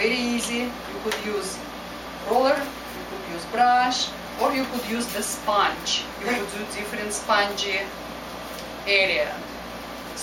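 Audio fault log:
Nothing wrong turns up anywhere in this one, so there's no fault to log.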